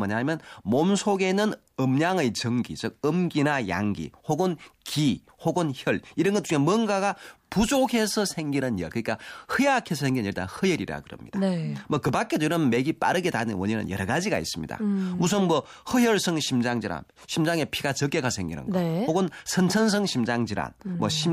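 No technical faults are audible.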